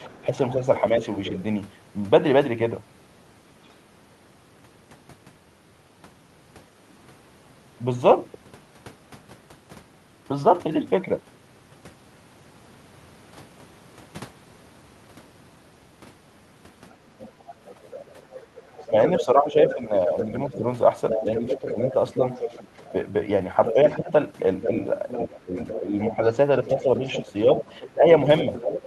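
A speech recording in which the echo canceller likely failed to fully remove the far end's loudspeaker sound from the microphone, so the other side's voice leaking through is audible: faintly, about 20 dB below the talker, from 0.04 to 1.42 s, and more strongly, about 10 dB below, from 16.92 s to the end. Where both sides talked at once, the canceller likely also turned the talker down, producing speech suppressed in double talk. From 0.11 to 1.32 s there are shallow dips of a few decibels, a brief 10 dB dip at 17.20 to 17.24 s, and from 18.42 s onward dips of about 10 dB adding up to roughly two seconds.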